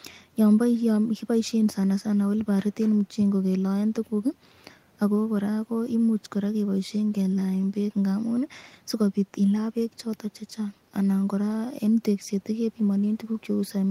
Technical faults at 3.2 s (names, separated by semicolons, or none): none